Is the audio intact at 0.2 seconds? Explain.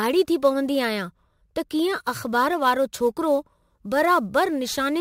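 No. Sample clock jitter runs throughout, including 0.2 s: timing errors of roughly several microseconds add hiss that rises with loud, bright speech, around 25 dB below the signal.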